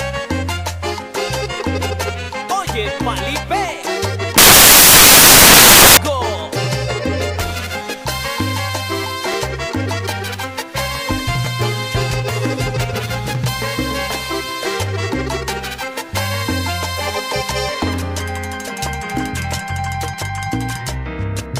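From 4.38 s to 5.97 s, the samples are built from the wrong bytes. The reader misassembles each value, so fast-changing low bits land in the top of the sample. The result is a burst of loud, harsh broadband noise covering the sound.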